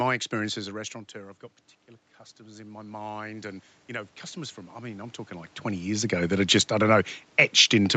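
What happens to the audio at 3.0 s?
At 3.0 s the automatic gain is rising. From 2.36 to 5.95 s, after "restaurateur I've got particular", the input has dropped by about 14 dB, so the gain climbs by about 8 dB and voice and background swell together.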